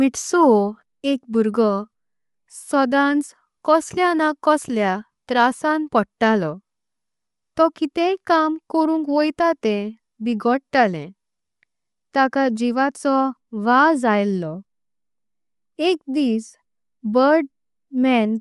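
Throughout the speech, nothing is present above 11.5 kHz, and the upper band carries a breathy, grainy texture. This is likely Bluetooth LC3 compression, with plainly audible damage that fits a moderate bitrate around 48 kbps.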